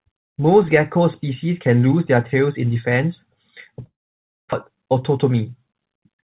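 A likely long network dropout interrupts this speech clip, which is carried over a narrowband call path with nothing above 4 kHz, consistent with a G.711-style codec. Just after "tails in defense a", the stream stops arriving at 3.86 s. The receiver stretches the last sound into a fading buzz, then goes almost silent for about 560 ms. Speech resumes at 4.55 s with roughly 600 ms of audio missing and the timing shifted slightly.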